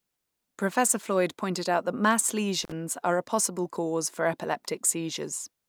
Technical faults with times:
2.63-2.72 intermittent contact

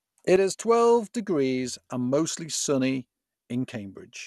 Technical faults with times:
0.00-4.26 MP2 compression
0.36-4.26 sudden gain jump

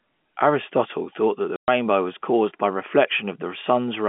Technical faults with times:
1.56-1.68 packet loss filled with silence

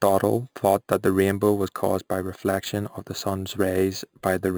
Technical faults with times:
0.00-4.58 imaging from sample-and-hold upsampling

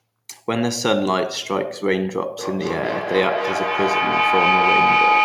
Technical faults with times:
2.39-5.25 feedback howl

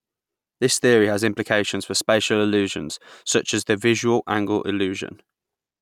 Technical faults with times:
none

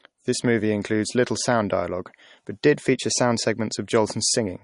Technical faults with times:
0.00-4.63 MP3 compression

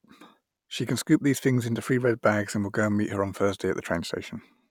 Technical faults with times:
none

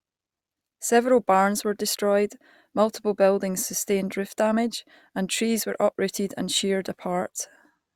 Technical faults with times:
none

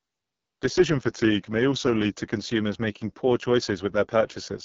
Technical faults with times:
0.00-4.64 AMR wideband (HD Voice) codec

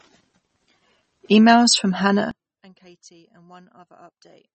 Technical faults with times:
0.00-4.54 MP3 compression
2.31-4.54 one channel inverted

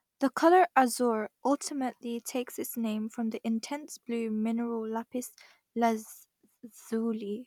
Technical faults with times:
none

